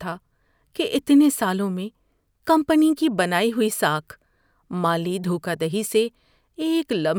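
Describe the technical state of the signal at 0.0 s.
At 0.0 s the speech signal is intact, with no audible fault at that moment.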